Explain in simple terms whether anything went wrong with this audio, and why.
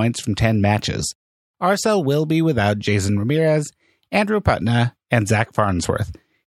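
Listening to the speech, nothing went wrong that a listener would notice.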